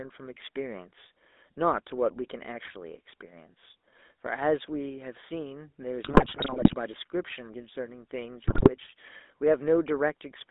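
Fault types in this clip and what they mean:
GSM full-rate codec: A speech coder models the vocal tract and drives it with a sparse pulse excitation. It affects the whole clip. The band is held to about 250 Hz to 3.6 kHz. A plainly audible buzzy, gravelly roughness fits a 13 kbps full-rate coder.
GSM bit errors: Flipped bits reach the decoder and corrupt its filter, pitch or gain values. The sound breaks into squawks, pops and gargling from 6.04 to 6.76 s and again from 8.42 to 8.71 s. The second, shorter burst has a heavier error rate.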